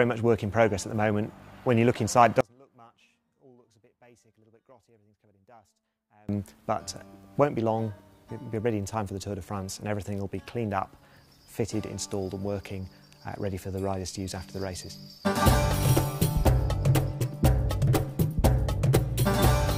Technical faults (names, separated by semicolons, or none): one channel inverted